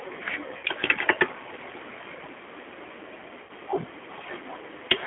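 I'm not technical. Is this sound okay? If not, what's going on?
No. The G.729 codec runs through the whole clip. It squeezes speech into a tiny data stream by rebuilding it from a simple model of the voice and keeping only the range from about 300 Hz to 3.4 kHz, so the speech sounds thin, rough and slightly robotic.

VoIP packet loss concealed by the speech codec happens twice, at 0.57 to 0.65 s and again at 3.43 to 3.51 s. Each time, roughly 60 ms of audio went missing in transit, and the decoder filled the gap by stretching the last sound into a brief, fading smear.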